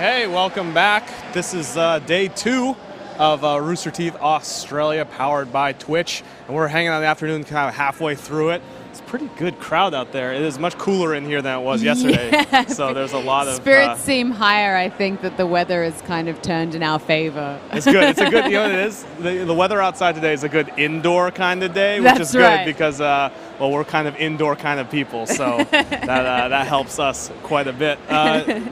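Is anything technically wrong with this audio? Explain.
Yes, there's a burst of hard clipping from about 14.49 to 14.51 s. For those few milliseconds the signal ran about 1 dB past what a stage could pass, so its peaks got sliced flat. The flat tops add high harmonics, heard as a quick crackle.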